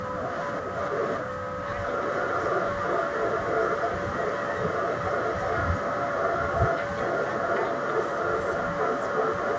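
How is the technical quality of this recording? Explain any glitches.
The recording has two recurring faults: brief dropouts early on and a strong delayed echo through most of the clip.

Speech suppressed in double talk occurs at 0.10–0.14 s, 0.62–0.73 s and 1.31–1.37 s, where the voice briefly drops away almost entirely. The likely cause is an echo canceller that could not separate the talker from incoming loudspeaker sound and ducked both. On a waveform these show as sudden near-flat notches. A spectrogram shows vertical gaps across the band, which stops at 8 kHz.

An echo leak runs from 0.28 to 1.2 s and again from 1.59 s to the end. A second copy of the voice trails about 0.35 s behind and is roughly as loud as the original. This is likely loudspeaker sound that the far side's echo canceller failed to remove. A spectrogram shows each syllable's pattern repeated, shifted right by that 0.35 s.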